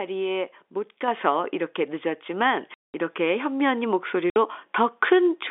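At 1.08 s the call software judged the microphone too quiet and raised its input volume in a single step, a microphone volume step-up of about 5 dB. Voice and background both jump louder at that instant and stay at the new level.

Later, packet loss filled with silence opens two holes: 2.74 to 2.94 s (200 ms) and 4.30 to 4.36 s (60 ms). Both lengths fit 20 ms packets. The receiver inserted silence for the missing audio, so the speech cuts out abruptly with hard edges, all within the narrow G.711 telephone band.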